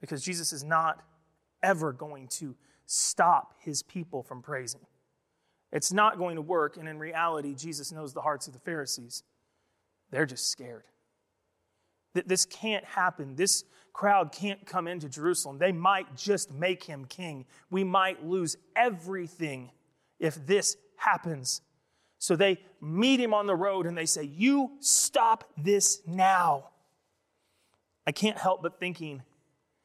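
Speech recording, with nothing technically wrong to report.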